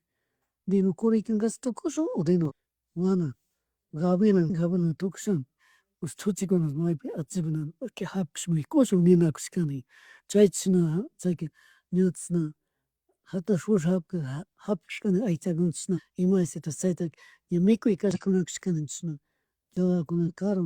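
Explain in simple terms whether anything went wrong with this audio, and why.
Two brief glitches interrupt the speech, at 2.45 to 2.52 s and 18.11 to 18.17 s. Both come from damaged data in a compressed stream: the decoder hit corrupted bytes and briefly lost its place.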